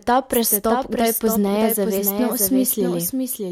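A doubled audio track runs through the whole clip: the speech is heard twice, with a second full-band copy trailing roughly 0.7 s behind and about 5 dB quieter. It carries no reverb tail or room colour, likely from a slower second capture path or misaligned edit.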